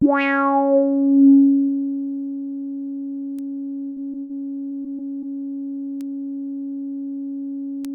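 Right at 3.39 s there's a bit error spike: a single sample got one bit flipped somewhere in storage or transfer, so its value leaps by a power of two and snaps straight back. You hear it as one hard, bright tick that has nothing to do with the surrounding sound. It's broadband, spread across the whole spectrum.

Then at 3.85 s comes a burst of packet loss running to 4.01 s. Roughly 100 ms of audio never arrived in time, and the receiver papered over it by stretching the last bit of sound it had, fading it out as the hole dragged on. So you get a held, buzzy or hissy tail, and when things pick up again a chunk of the material has simply been skipped.

Just after, between 4.11 and 4.15 s, there's a short concealed packet loss of about 20 ms. The decoder extrapolated across the gap and blended back into the real signal, which comes across as a quick smear or little wobble rather than an obvious dropout.

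A second burst of packet loss hits from 4.21 to 4.31 s, this time around 80 ms missing. It's the same mechanism as the first: the last sound gets carried forward and faded, and the content in between is lost.

From 4.67 to 5.24 s it turns into repeated packet loss with that robotic quality. There are four separate gaps adding up to about 100 ms, the longest around 33 ms, so roughly a sixth of the stretch is patched. Each patch continues the previous sound, and the next hole arrives before things settle. The result is choppy audio with bits missing.

Finally there are two more bit error spikes, at 6.01 s and 7.85 s. Each hits two adjacent samples and produces the same sharp, unrelated click as the first one.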